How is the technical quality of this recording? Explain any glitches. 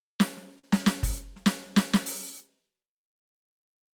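The music is marred by an unsteady, slightly dragging tempo and one brief held sound, both timing faults on the playback path.

Clock drift between sender and receiver runs through the whole clip: the pulse feels faintly uneven and sluggish. The sender's clock runs roughly 3% slow, so the receiver's jitter buffer keeps draining and the playback has to be padded to avoid running dry.

Repeated timing corrections, from 0.05 to 3.93 s, are small edits to the rhythm. The receiver keeps repeating short pieces, adding about 70 ms in total and playing at 98% speed. The edits all lengthen the audio and are unevenly spaced.

A short stall from a late packet, from 0.59 to 0.64 s, holds one sound too long, with a slight buzz or dip. A packet arrived late, so the receiver stretched the last sound for 43 ms until it came, then resumed without losing anything.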